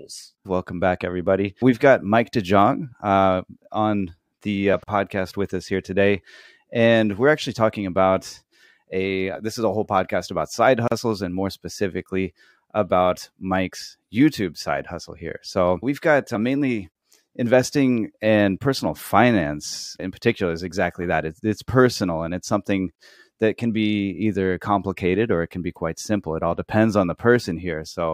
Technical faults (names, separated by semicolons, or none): gap at a join of encoded pieces